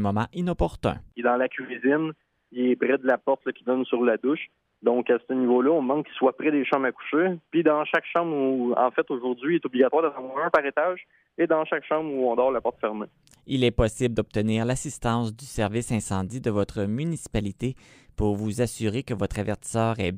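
No technical faults are audible anywhere in the audio.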